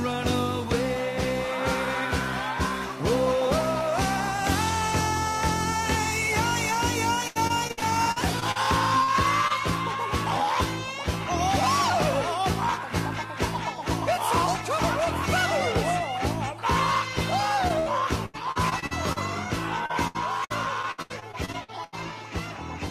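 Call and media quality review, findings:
Repeated packet loss (robotic sound), 7.27–8.57 s, 18.26–19.18 s, 19.86–21.94 s: network jitter/loss hitting the decoder roughly every 150–175 ms, concealment filling about a quarter of each stretch. Choppy sound, gaps up to 82 ms.

Short concealed packet loss, 9.03–9.10 s, 9.48–9.52 s, 17.68–17.72 s: 20–40 ms holes patched by extrapolating the preceding sound. Heard as brief smears or wobbles.

Burst of packet loss, 17.80–17.88 s: roughly 60 ms of consecutive late or lost packets, concealed then faded. Held buzz or fading hiss, then sound resumes with that stretch missing.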